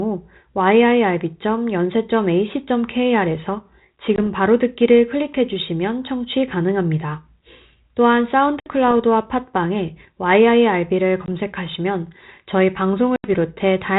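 Packet loss on an ADPCM call hits at 4.16–4.19, 8.60–8.67, 11.26–11.28 and 13.16–13.28 s. Each gap cuts 20 to 80 ms to hard-edged silence. The decoder's predictor and step size then drift from the sender's. Speech returns slightly distorted.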